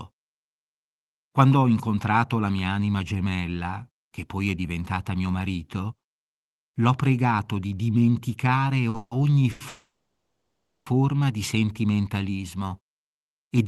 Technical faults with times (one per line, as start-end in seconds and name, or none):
8.89-8.96 short stall from a late packet
8.96-9.13 call audio freeze
9.51-9.62 short stall from a late packet
9.68-10.88 call audio freeze